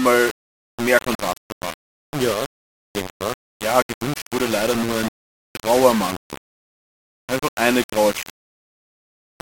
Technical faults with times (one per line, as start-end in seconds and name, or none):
0.00-9.42 low bit depth without dither